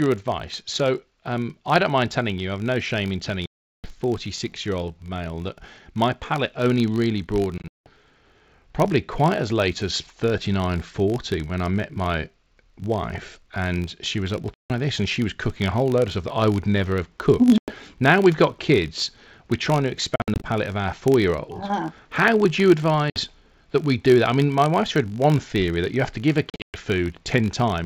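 A filter restarted on every block runs throughout: each block begins from a cleared state, so a small transient repeats as a 50 Hz buzz that rises and falls with the speech level. Packet loss on an ADPCM call appears at 3.46–3.94 s, 7.58–7.89 s, 14.54–14.72 s, 17.58–17.74 s (after "would never have cooked"), 20.16–20.47 s (between "kids we're trying to" and "of our four year"), 23.10–23.21 s and 26.50–26.80 s (after "have to give a"). Each is a hard-edged silence, the longest about 380 ms and the shortest about 60 ms. At 7.58, 20.16 and 26.50 s the gaps are scattered rather than single. After each one the decoder's predictor and step size no longer match the sender's, so the speech returns slightly distorted before settling. Underneath, the G.722 wideband coding sounds consistent with 64 kbit/s, with speech reaching about 7 kHz.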